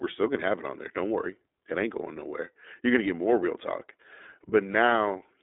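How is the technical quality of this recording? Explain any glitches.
The quality is limited by low-rate codec compression across the whole clip. It has passed through the iLBC codec, a narrowband VoIP coder that encodes each 30 ms frame's excitation independently of the frame before. The character of the damage fits its 13.33 kbps mode. From start to finish the speech sits in a telephone band of roughly 250 Hz to 3.6 kHz, with nothing above 3.7 kHz, so it sounds muffled and boxy. The coding damage is plainly audible, giving the speech a rough, slightly synthetic texture.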